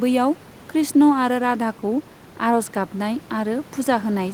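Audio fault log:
No fault is logged for this speech clip; the room noise sits about 23 dB below the speech and is part of the recording.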